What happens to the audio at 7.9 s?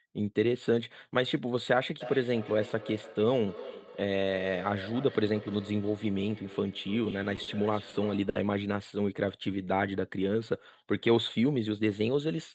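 A short stall from a late packet occurs at 7.89 to 7.96 s. A packet arrived late and the jitter buffer ran empty, so the receiver held the last sound for 40 ms and then resumed where it left off. Nothing is lost, but the sound drags slightly with a slight buzz or dip.

Feedback echo between two devices is also present at that moment. It runs from 2.01 to 8.49 s, peaking about 15 dB below the speech. A second device in the room replays the call into the microphone, so the speech returns roughly every third of a second, thinner and ringing.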